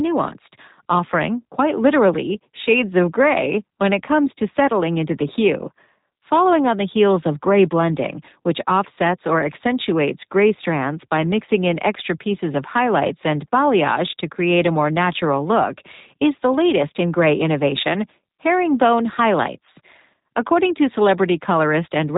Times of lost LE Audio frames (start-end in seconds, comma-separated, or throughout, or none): none